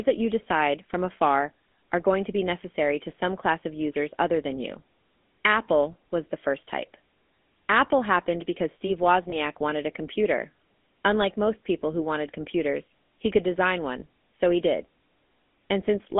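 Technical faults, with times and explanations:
Throughout, GSM full-rate codec: speech sits within 250 Hz to 3.5 kHz with a buzzy, gravelly roughness from pulse-excited vocal-tract modelling, consistent with 13 kbps full rate.
9.30 to 9.34 s, before "wanted a computer", and 14.00 to 14.03 s, between "computers he could design" and "so he did", lost GSM frames: each brief gap is bridged by repeating the last good frame, leaving a short metallic ring consistent with one lost 20 ms frame.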